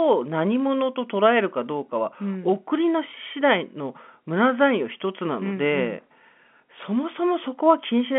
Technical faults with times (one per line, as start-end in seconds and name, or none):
0.00-8.18 block size mismatch (padded)